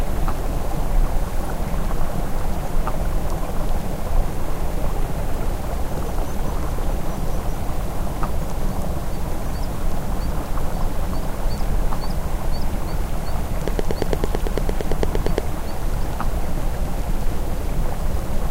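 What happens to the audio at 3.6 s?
Nothing goes wrong at 3.6 s; the sound there continues intact, with no dropout, click, distortion or other break.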